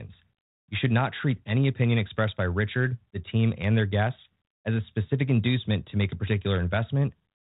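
No technical faults can be heard anywhere in the speech. The audio carries the narrow telephone band of G.726 ADPCM at 32 kbit/s, with nothing above 4 kHz and only a light trace of coding noise that follows the level of the speech.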